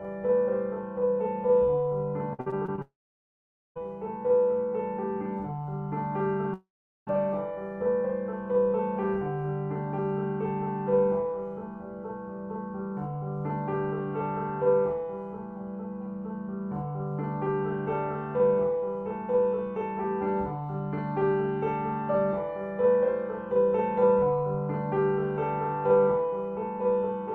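From start to finish there is a channel delay, heard as doubling. One channel runs about 46 ms behind the other. That lag fits a 2048-sample buffer. When the two are folded to mono, the late copy does not blend in. It sits apart at equal level. Every onset gets a close slap, and the sound seems thickened and doubled.

From 2.33 to 2.80 s comes repeated packet loss, heard as robotic sound. Short holes open one after another. The longest is about 54 ms. Each is patched by stretching the sound just before it. About a third of this span is patched material. The result is choppy, with pieces of sound missing.

Right after, from 2.82 to 3.78 s, there is a long network dropout. A brief fading buzz carries on the last sound. Then comes about 850 ms of silence. The audio returns with that stretch gone. The cause is likely a network interruption in which no audio arrived.

A second long network dropout follows from 6.54 to 7.13 s. 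It behaves the same way. A short fading tail gives way to about 420 ms of silence. The sound then resumes without the missing part.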